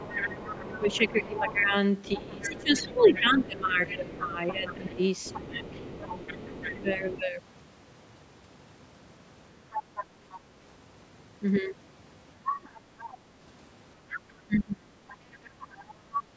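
From 0.0 to 5.66 s the speech is suppressed in double talk, dipping by roughly 15 dB for about four seconds in all, likely because the echo canceller turned the talker down along with the loudspeaker echo. The waveform's envelope sags and the spectrogram's upper harmonics thin. A shallower dip of about 5 dB follows at 6.82 to 7.07 s, and a deep one of about 30 dB at 14.46 to 14.94 s shows as a near-blank gap.

The other side's voice leaks through from 0.03 to 7.24 s, at 9.71 to 10.4 s, at 12.45 to 13.14 s and from 14.1 to 16.22 s, at roughly 10 to 15 dB below the speech. The likely cause is echo the canceller left in the microphone signal. It shows as faint, overlapping harmonic traces on the spectrogram.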